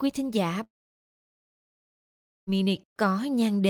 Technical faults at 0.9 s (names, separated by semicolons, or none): long network dropout